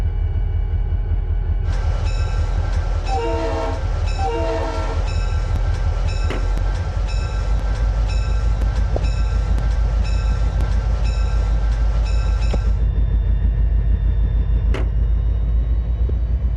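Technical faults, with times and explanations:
5.56 to 10.61 s, periodic USB or driver dropouts: about seven brief gaps of roughly 4 ms, spaced 1.02 s apart and filled with silence. Something is stalling the bus or audio driver on a fixed cycle, so each stall cuts a sliver of signal and leaves an evenly timed tick.
8.94 to 8.97 s, 12.52 to 12.55 s and 16.1 s, damaged data in a compressed stream: three short disturbances where corrupted bytes made the decoder misread or reject frames and lose sync while hunting for the next valid header. The result is a brief glitch or hole at each point.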